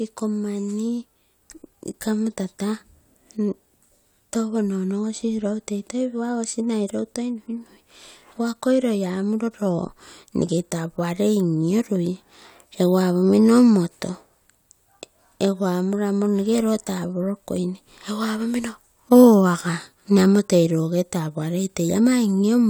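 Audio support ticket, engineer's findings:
Findings: no audio fault found in the speech recording; nothing to action on this ticket.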